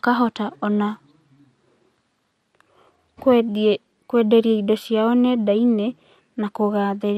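Throughout the speech, the audio likely passed through MP2 compression at a bitrate too low for it, consistent with roughly 80 kbps. The MPEG Layer II encoder divides the spectrum into 32 sub-bands and, short of bits, shuts off upper bands and quantises the rest coarsely. The result is plainly audible: a dull, band-limited sound with a gurgling, granular roughness as the top bands flicker in and out.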